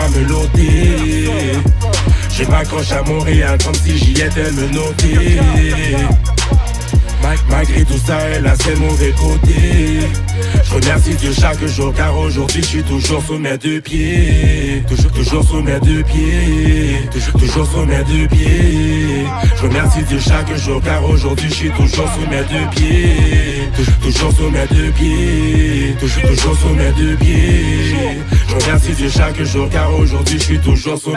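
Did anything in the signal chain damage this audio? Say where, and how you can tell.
No, no signal-chain damage audible.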